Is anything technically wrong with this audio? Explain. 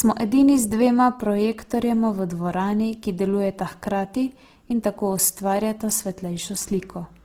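Yes. Throughout the speech there is plainly audible Opus compression damage, likely from encoding in Opus's CELT music mode at a low rate, which fits roughly 16 kbps. The bandwidth stays full, with content reaching about 20.3 kHz, so the sound is not muffled. Instead, the encoder preserves each band's energy but, short of bits, refills bands by folding lower ones or with noise. That makes the voice sound rough, grainy and noisy.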